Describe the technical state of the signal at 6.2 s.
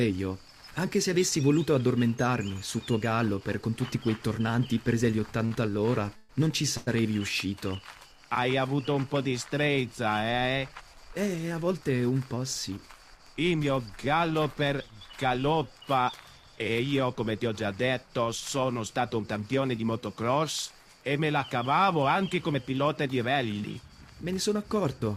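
A call audio freeze runs from 6.17 to 6.31 s: the last sound is stretched into a fading buzz for about 124 ms, likely because packets stalled and the jitter buffer ran dry. Playback then resumes where it stopped, nothing lost but running 124 ms later.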